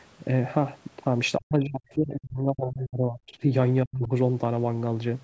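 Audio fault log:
1.38–3.5 s and 3.85–4.1 s, speech suppressed in double talk: the speech sinks by roughly 35 dB across about two seconds, then dips again by roughly 40 dB for a brief moment. This likely comes from an echo canceller that could not separate the talker from overlapping loudspeaker echo and turned both down.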